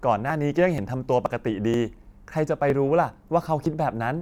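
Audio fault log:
0.30, 0.78, 1.26, 1.74, 2.70 and 3.66 s: audio missing between chunks. The speech skips briefly at each point, losing roughly 20 ms. The joins butt together without silence. The steady spacing likely comes from processing in 0.5 s chunks that drops audio at boundaries.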